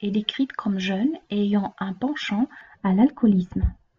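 De-emphasis applied wrongly affects this speech clip from 2.61 s to the end, just after "et ayant un penchant": an unneeded treble cut slopes the response down to about 11 dB at 10 kHz, muffling it.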